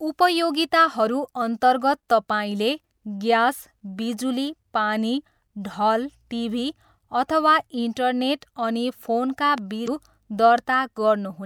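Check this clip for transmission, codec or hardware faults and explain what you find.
Two faults are audible, both just after "अथवा इन्टरनेट अनि फोनका".

The first is a loud pop from 9.58 to 9.60 s. A single sharp click stands about 5 dB above the speech, which continues underneath. It likely comes from a brief voltage spike, such as static or a switch, added to the signal and shaped by the circuits after it.

The second is damaged data in the compressed stream, from 9.84 to 9.88 s. Corrupted bytes make the decoder misread frames, lose sync and hunt for the next valid header. The result is a short blip.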